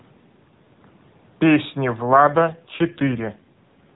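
At 2.09 s an AMR rate drop lasts to the end: the codec steps down, consistent with a 12.2 to 5.9 kbps switch, and the speech turns rougher and more synthetic.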